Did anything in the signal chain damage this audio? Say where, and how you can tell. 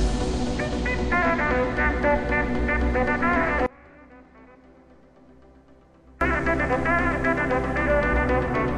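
Yes. The music suffers an audio dropout to a faint residue from 3.66 s to 6.21 s, about 2.5 s of lost signal, with only a faint trace remaining, roughly 25 dB below normal level. The cut and the return are both abrupt. On a waveform the envelope collapses to a thin band and then snaps back. A spectrogram shows a dim, washed-out block with hard vertical edges. The likely cause is a momentary break in the analogue wiring or connection, while the downstream path stayed live.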